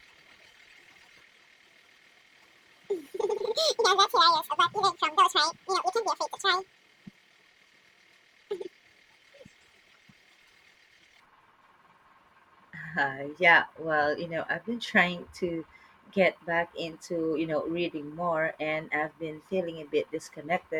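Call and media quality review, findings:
Audio read two samples at a time (double speed), 0.0–11.2 s: the decoder or sample reader takes sample pairs as single frames, consuming input at 2.0x. Speech runs twice as fast, pitched an octave up.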